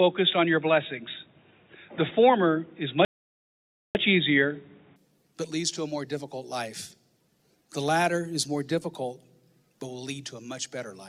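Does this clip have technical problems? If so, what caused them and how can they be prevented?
Yes. From 0 to 4.96 s the sound is narrowband and boxy, with nothing above 3.8 kHz. This is likely an input switched to a poorer device. At 4.96 s it clears without a gap, with a level shift of roughly 5 dB and a change in background noise. To prevent it, lock the recording input and disable automatic headset call profiles.

From 3.05 to 3.95 s the sound drops to silence for 0.9 s, then resumes. This is likely a Bluetooth stall, where interference delayed packets and the headphone buffer ran dry. To prevent it, keep the devices close, reduce 2.4 GHz interference, or use a wired connection.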